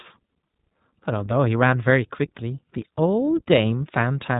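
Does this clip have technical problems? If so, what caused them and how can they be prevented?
Yes, the speech carries iLBC codec damage throughout: nothing passes above 3.8 kHz, and each short frame is coded independently, giving a rough, synthetic grain that fits 20 ms frames at 15.2 kbps. A plain low-pass filter would dull the sound without that roughness. Prevent it by recording or transmitting with a wideband codec at a higher bitrate.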